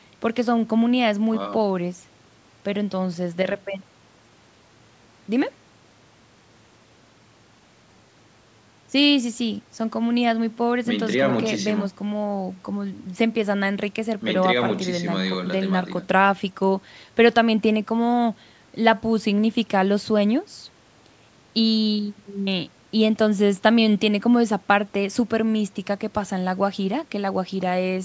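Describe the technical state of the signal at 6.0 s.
The speech at 6.0 s is intact, with no technical fault at that moment.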